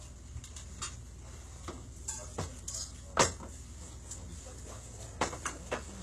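A short recording of sounds carries plainly audible HE-AAC compression damage from start to finish, likely from a very low bitrate, around 16 kbps. The treble sounds rebuilt rather than captured: gritty and metallic. On a spectrogram, upper bands look like copied blocks of lower ones, and nothing appears above 15.2 kHz.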